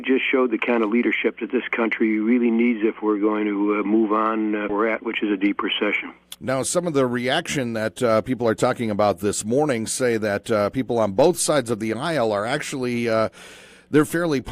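From 4.79 to 5.88 s, a jitter buffer speed-up trimmed about a tenth of a second of backlog in pitch-period slices, so the sound runs hurried at 107% speed, pitch unchanged.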